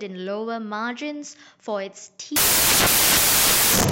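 From 2.36 s to the end of the speech, the audio turns into loud, harsh broadband noise, and the cause is samples built from the wrong bytes. The reader is assembling each sample out of mismatched bytes, whether shifted by one, swapped in order or misaligned, so the rapidly changing low bits end up carrying the bulk of every value. That's why it sounds like harsh noise in place of the speech.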